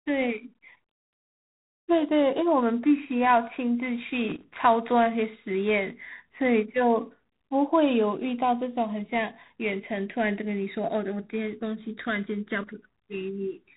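A harsh, rasping hiss rides on the speech from start to finish, rising and falling with its level, and nothing above 3.9 kHz gets through. This is G.726 ADPCM, coding each sample as a coarse difference from an adaptive prediction. The plainly audible damage fits a 24 kbit/s rate.

From 4.29 to 4.44 s an irregular burst of scratchy crackle cuts in, with the signal briefly chopped. That is loose connector crackle: a worn or dirty contact making and breaking rapidly as it shifts.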